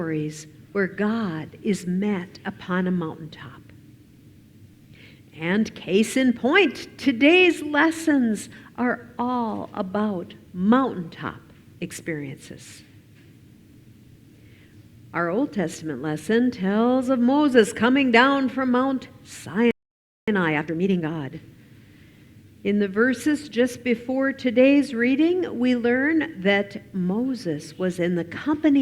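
At 19.71 s the sound cuts out mid-flow and the output stays silent until 20.28 s, a gap of about 0.57 s. This is a playback stall, likely from the player running short of buffered data or its audio thread being blocked, so nothing reached the output until it recovered.

From 20.28 s to 21.40 s the audio rushes ahead at 1.5 times normal speed while holding its original pitch. This is time-compressed catch-up: the player drains the backlog left by the stall by dropping short slices and cross-fading across the joins.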